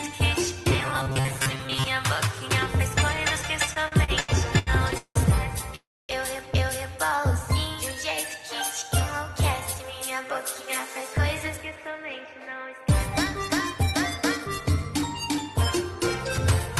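From 0.71 to 1.88 s, new audio was likely reaching the playback side too seldom, so the software kept replaying a very short stretch of the last buffer while the real material in between was skipped, roughly half of it in this span. Each loop lasts about 7.5 ms, and that steady repetition imposes a fixed 133 Hz tone. The result is robotic sound from repeated short buffers: a hard, metallic buzz that only loosely tracks the underlying sound.

Between 3.73 and 5.18 s come repeated stalls (stutter). Packets kept arriving late, and the jitter buffer ran dry seven times. Each time, the receiver stretched the last sound to cover the wait, about 460 ms in all, roughly a third of that span, with the longest hold at 178 ms. Nothing is lost, but the audio lurches forward in fits, dragging and catching repeatedly.

At 5.75 s a call audio freeze follows. The likely cause is packets held up in transit, which emptied the buffer for 335 ms. 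The receiver continued the last sound briefly, and it fades to silence for about 260 ms before playback resumes at 6.12 s exactly where it stopped. A gap has been inserted, and the stream now runs 335 ms later.

From 7.09 to 7.99 s a jitter buffer slow-down rebuilds that reserve. The receiver repeated single pitch periods and bits of pauses back to back, adding 88 ms, so this stretch plays at 91% speed. The pitch is unchanged, but sounds are drawn out and the rhythm sags.

Three jitter buffer speed-ups then trim excess delay. The receiver cut out pitch-period-sized pieces, about 70 ms from 10.00 to 11.11 s at 106% speed, about 150 ms from 11.57 to 12.87 s at 109%, and about 70 ms from 13.75 to 14.84 s at 105%. The pitch stays where it was, but each passage sounds hurried and clipped, the middle one most noticeably.

Throughout, the Opus call path leaves its usual coding noise, and the top of the spectrum stops around 12 kHz.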